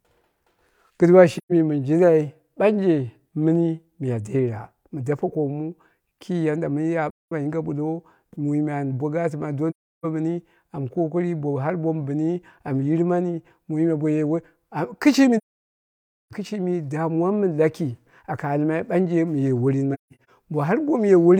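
At 1.37, 7.10, 9.70, 15.37 and 19.93 s, AAC frame loss with muting zeroes lost frames, leaving gaps of 0.13, 0.21, 0.34 and 0.94 s, then a broken patch over 0.34 s. Overlapping windows fade each edge, so the holes are soft-edged.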